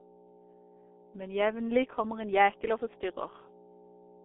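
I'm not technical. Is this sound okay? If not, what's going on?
No. Throughout the speech there is a mains hum: a steady, fairly loud low buzz at 60 Hz, picked up from the power supply. Unlike rumble or wind noise, it never changes. It stays at one fixed pitch even when nobody is talking.

The voice also carries heavy damage from the G.723.1 codec, an old internet-phone compression method. Nothing above 3.8 kHz survives, so the speech sounds muffled, hoarse and blurred at consonants. A plain phone-line filter would only dull the sound without adding that rough, smeared quality.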